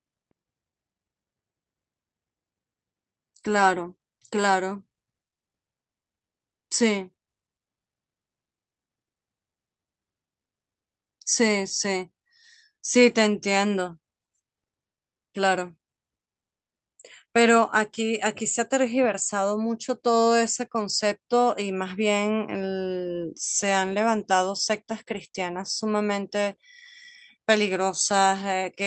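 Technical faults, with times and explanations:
No technical faults can be heard in this speech.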